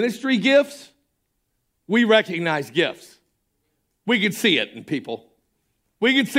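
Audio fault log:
No technical faults can be heard in the speech signal, which stays continuous and stable throughout.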